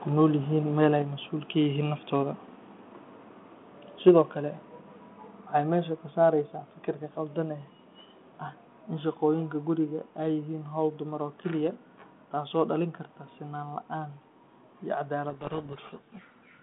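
At 1.02 s the speech and its background drop suddenly by about 4 dB, and at 4.09 s they fall again by about 3 dB. This is the microphone volume stepped down, likely the call software lowering the input volume in a single step each time after judging the level too high.

Between 4.07 and 4.10 s the loudest peak turns harsh and crackly, with its tops flattened about 3 dB past the limit across roughly a tenth of the samples. That points to microphone overload, likely the input volume set too high for the converter. The second step down lands right on the end of this distortion.

From 15.3 s to the end, the speech, carried over G.726 at 32 kbit/s within a 150 Hz to 3.4 kHz telephone band, is buried in harsh, grinding distortion. This is a codec payload misread: the decoder takes the bits of each G.726 code word in the wrong order, so the sample differences it rebuilds are wrong.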